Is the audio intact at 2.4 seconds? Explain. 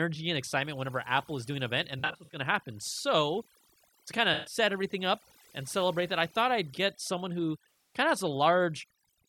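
No, not quite. It sits right at the tail of AAC frame loss with concealment, running from 1.99 to 2.39 s, between "is doing an event" and "to happen". Dropouts totalling about 213 ms are scattered across 341 ms, in runs of a few tens of milliseconds, which fits about ten lost frames. The decoder patches each gap from the last good spectrum, so it sounds smeared and phasey rather than going silent.

Underneath that, there's overdone noise removal across the whole clip. Bands near the noise estimate get pulled right down, taking quiet parts of the speech with them, so the background drops and breaks up into twinkly specks.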